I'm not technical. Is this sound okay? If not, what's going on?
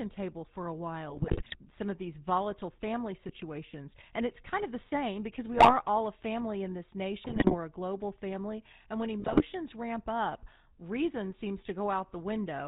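No. The whole clip runs through the GSM full-rate codec, the old mobile-phone voice coding. It rebuilds the voice from a rough model, cuts everything above 4 kHz, and leaves a plainly buzzy, gravelly roughness on the speech from start to finish.

On top of that there are GSM bit errors, where a weak phone link scrambled parts of the signal. You hear squawks, pops and gargling at 1.1–1.56 s (between "table for a" and "some of these volatile"), 3.28–3.39 s, 5.54–5.74 s (between "of the same because" and "all a family in"), 7.24–7.56 s, and 9.2–9.42 s, just before "ramp up reason seems".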